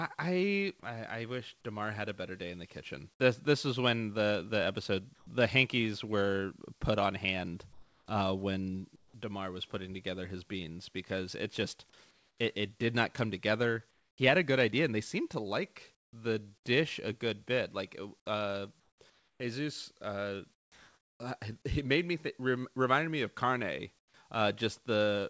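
Sound dropped by the voice detector at 0.80 to 0.83 s: about 20 ms of speech vanishes and a brief wash of steady, featureless noise fills the 30 ms gap before the sound returns. The likely cause is the sender's voice detector mistaking part of the sound for background, halting transmission, so the receiver substituted synthetic noise until the detector triggered again.

Comfort noise in place of the background follows at 5.15 to 5.27, 7.73 to 9.14, 12.11 to 12.38, 13.91 to 14.18, 15.95 to 16.13, 18.80 to 21.20 and 23.99 to 24.14 s. In each pause the real background, already about 36 to 42 dB below the loud parts, turns smooth and characterless and drops by about 5, 5, 8, 14 and 11 dB where measured. Within the two longer spans, roughly half a second and just over a second are swapped. This likely comes from discontinuous transmission: the sender stops in silence and the receiver generates noise shaped only roughly like the original. 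Throughout, the G.722 call path leaves nothing above 8 kHz.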